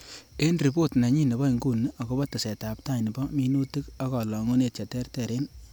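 No technical faults can be heard anywhere in this speech recording. Nothing interrupts or alters the sound at any point.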